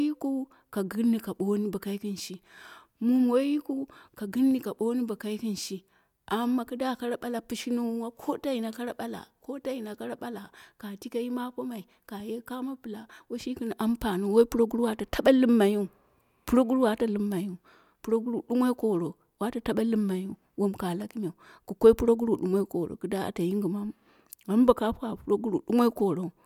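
A speech recording with no audible technical fault at any point. There is nothing to time or trace to a cause.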